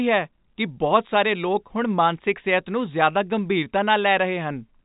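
No technical faults are audible.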